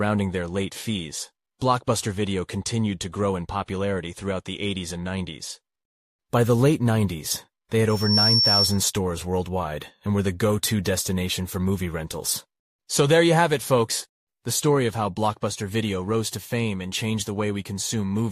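At 7.89 s a microphone starts picking up the loudspeaker it drives, and the loop gain passes unity at 5.4 kHz. That loudspeaker feedback squeal swells over roughly a third of a second to about 5 dB above the sound, then stops at 8.86 s.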